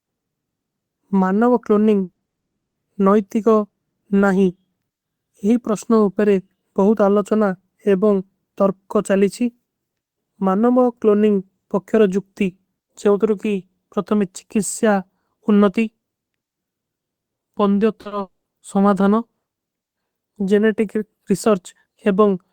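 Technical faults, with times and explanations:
2.03–2.39 s, repeated packet loss (robotic sound): Packets went missing or arrived late six separate times, the longest gap lasting 60 ms. The receiver patched each hole by extending the previous sound, so about half of this stretch is synthetic fill, and the sound turns choppy, with fragments cut out.
2.39–2.77 s, long network dropout: The sound stops for roughly 0.36 s, most likely because no packets reached the receiver at all. The gap is silent throughout, and playback resumes later with the missing portion simply gone.
18.01–18.07 s and 18.07–18.13 s, short concealed packet loss: Two back-to-back holes of 40 ms each never reached the decoder in time. Each was filled by carrying the preceding sound forward and then blending back into the real signal, which gives a quick smear or wobble where the sound briefly loses definition.
18.21–18.47 s, long network dropout: About 0.24 s of sound is missing, most likely because the incoming stream stopped entirely. 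The filled-in continuation dies away and leaves about 170 ms of silence before the sound returns, with that section permanently lost.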